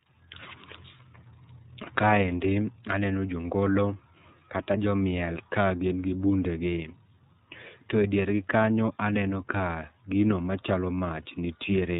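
From start to finish the speech carries the sound of the iLBC codec, and it's plainly audible. Everything above 4 kHz is gone, so sibilants lose their edge and the whole thing sits in that narrowband telephone box. Each frame's excitation gets coded on its own, without borrowing from the previous one, which leaves the voice clear enough but a bit rough and synthetic. The texture fits the 13.33 kbps mode with 30 ms frames.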